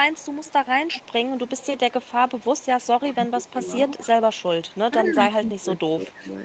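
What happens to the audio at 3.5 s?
Around 3.5 s, the speech dips from 3.11 to 3.58 s, falling by about 15 dB at its deepest. This is likely speech suppressed in double talk. The echo canceller heard both sides at once, could not tell them apart, and turned everything down.

Overlapping that, from 3.28 to 3.52 s, a very faint copy of the speech trails 217 ms behind. This is likely an echo leak. The far end's canceller let some loudspeaker sound through its microphone and sent it back.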